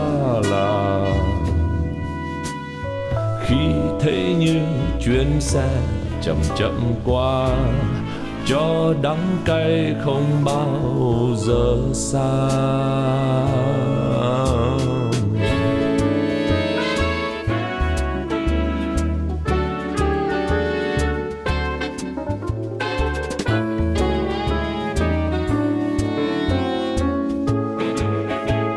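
No technical faults can be heard anywhere in the audio.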